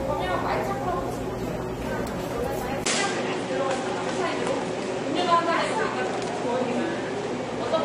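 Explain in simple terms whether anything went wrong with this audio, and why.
Two problems can be heard.

The first runs through the whole clip: transcoding between lossy codecs. The sound was most likely squeezed by one compressed format and then squeezed again by another, AAC-LC. Each pass throws away detail and leaves its own small smearing and swirling, and here those layers pile up. Nothing survives above about 16.3 kHz, so the very top sparkle is gone throughout.

The second starts at 2.84 s: the input switched to a poorer device. There is a brief gap of about 20 ms at the switch, and from then to the end the sound comes through narrower and duller, with nothing above about 10.5 kHz. The overall loudness stays about the same, but a faint new background noise appears that was not there before. That mix of a sudden tone change and fresh noise at one moment points to the system having changed its input device mid-recording.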